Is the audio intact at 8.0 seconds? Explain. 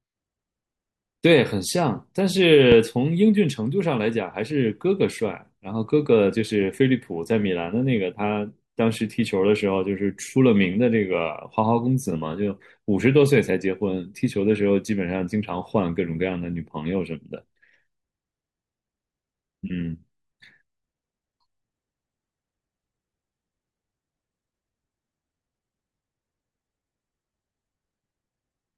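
Yes, at 8.0 seconds the speech plays through cleanly, with no dropout, click, distortion or other fault to be heard at that moment.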